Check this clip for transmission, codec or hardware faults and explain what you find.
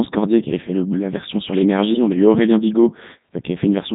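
Two faults are audible. Codec 2 vocoder, throughout: at 3.2 kbit/s the speech is rebuilt from sine waves using only pitch, voicing, energy and spectral envelope, so it sounds heavily robotic and buzzy. Bit errors on digital voice radio, 3.60 to 3.67 s: around one percent of bits flipped, corrupting what fits about two frames, giving a brief warbling jump in pitch, level and tone.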